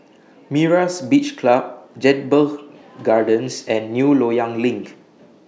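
No technical faults are audible.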